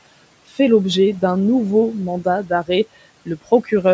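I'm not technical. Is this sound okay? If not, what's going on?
No. Just after "d'un nouveau mandat d'arrêt", between 3.26 and 3.72 seconds, brief bits of speech go faint and swallowed. This is speech cut by the noise suppressor: the background-noise filter mistook those quiet sounds for noise and turned them down.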